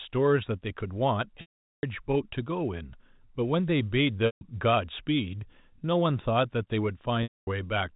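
Packet loss with pitch repetition occurs at 1.41–1.83 s, 4.26–4.41 s and 7.23–7.47 s in this G.711 telephone speech. The receiver loops the last pitch period, heard as a brief buzzy hold that fades to silence over about 50 ms. The speech then cross-fades back in.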